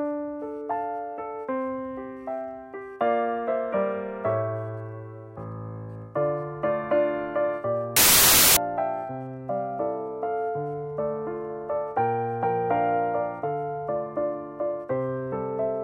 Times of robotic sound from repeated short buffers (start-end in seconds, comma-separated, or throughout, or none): none